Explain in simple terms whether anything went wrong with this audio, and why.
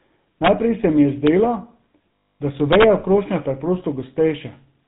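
The whole recording has passed through the GSM full-rate codec, an early mobile-phone speech coder. It rebuilds the voice from a simplified model driven by regular pulses and drops everything above 4 kHz, so the speech sounds muffled, buzzy and gravelly throughout.

From 2.16 to 2.41 s, just before "da so", there are lost GSM frames. About a quarter of a second of the signal never arrived, so the decoder kept repeating the last good sound, which produces a rough, metallic ringing hold instead of the real speech.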